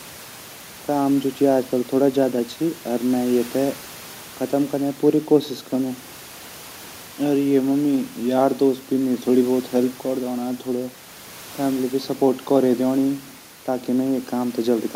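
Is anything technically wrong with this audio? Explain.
No, nothing stood out on listening to this speech clip, apart from the quiet background sound of the room, which sits about 24 dB below the speech and belongs to the recording itself.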